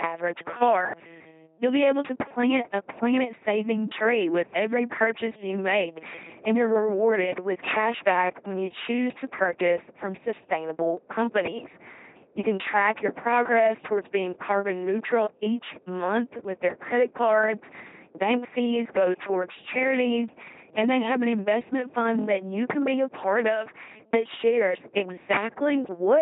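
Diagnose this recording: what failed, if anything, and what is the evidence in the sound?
Mains hum in the analogue wiring runs the whole way through: a steady 50 Hz drone with some low harmonics, sitting only about 5 dB under the speech. That's a ground loop or a nearby transformer leaking the power line straight into the signal path.

The codec did heavy damage. This is the LPC-10 vocoder, and it sounds like one: buzzy, mechanical robot speech with nothing above 3.8 kHz, which fits a 2.4 kbit/s coder. Each frame gets forced to all-voiced or all-noise, so wrong calls come out as stray buzz or hiss.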